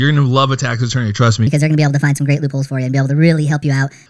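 A speech recording jumps suddenly from 1.47 s to 4.06 s into a higher, hurried register: the talker is about 1.38 times faster and about 5.5 semitones higher, with both shifts locked together. That coupling is the signature of a wrong sample rate, where samples are played back faster than they were captured with no rate conversion. The 1.38 ratio fits audio recorded at 16 kHz but played at 22 kHz.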